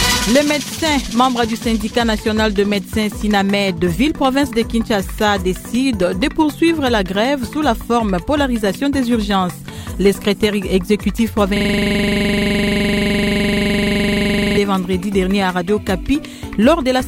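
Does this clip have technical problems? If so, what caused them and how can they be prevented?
Yes, a system hang loop runs from 11.57 to 14.57 s. A frozen driver left one 42.67 ms buffer cycling, heard as a 23.4 Hz stutter and seen as identical repeating waveform blocks. A watchdog that mutes output when the driver stops refilling the buffer prevents this.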